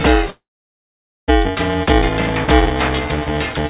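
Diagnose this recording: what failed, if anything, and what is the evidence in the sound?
At the driver or buffer stage, the application writing the playback ring buffer and the hardware reading it have drifted until they cross inside every period. Buffer tearing results: in each period, roughly a third of the buffer still holds audio from a few milliseconds earlier, joined hard on both sides. Throughout the clip this produces a steady robotic buzz at 375 Hz, audible only while sound is present, which fits a 128-sample buffer.

At the network stage, a long network dropout is the likely cause of a gap from 0.30 s to 1.30 s. The receiver had nothing to play for almost a second. It extended the last sound as a buzzy fill that fades, leaving silence for the last 0.86 s of the gap. When audio resumes at 1.30 s, the lost stretch, about 0.98 s, is simply missing, with nothing above 4 kHz from the G.711 call codec on either side.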